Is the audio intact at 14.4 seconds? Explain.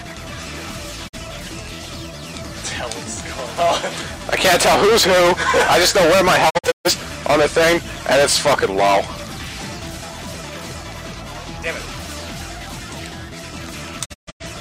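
No. At 14.4 seconds the sound falls into a digital broadcast dropout running from about 14.04 to 14.45 s. It fades to silence over roughly 20 ms, then breaks into several short holes, about 256 ms missing in total across some 341 ms, the longest gap 128 ms. The receiver lost the signal or rejected corrupted frames and muted until clean ones arrived, so whatever was sent in those gaps is gone. The gaps fit about six lost frames.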